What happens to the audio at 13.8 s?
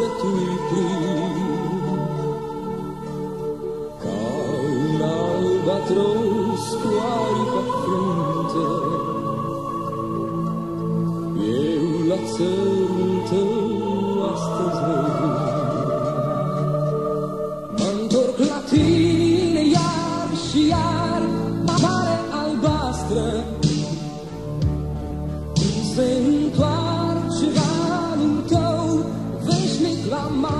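Nothing goes wrong at 13.8 s; the audio plays through that point intact, with no dropout, click or distortion.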